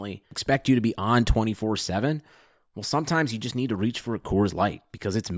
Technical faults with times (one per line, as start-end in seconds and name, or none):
none